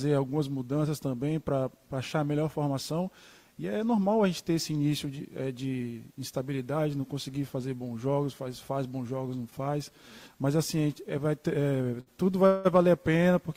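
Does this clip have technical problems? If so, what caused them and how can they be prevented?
Yes. Near 12.00 s the sound hangs for a moment, stretched out with a faint buzz or dip for about 63 ms until 12.08 s, then carries on with nothing skipped. This is a short stall from a late packet. A packet was not there when it was due, so the jitter buffer ran empty and the receiver extended the last sound to fill the wait. It then resumed exactly where it had stopped, about 63 ms later than before. A slightly deeper jitter buffer, or one that adapts to network timing, would absorb a delay this small.

From 12.46 s to 12.67 s there is a longer hold. The last sound is drawn out into a buzzy or hissy tail for about 182 ms without ever dropping to silence, and then the audio continues from the same point with nothing missing. This is a call audio freeze. Its likely cause is packets being held up in transit long enough to drain the jitter buffer, so the receiver kept generating fill until they arrived, leaving the rest of the audio about 182 ms behind. 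A more stable network path, with traffic prioritised for real-time audio, would help prevent it.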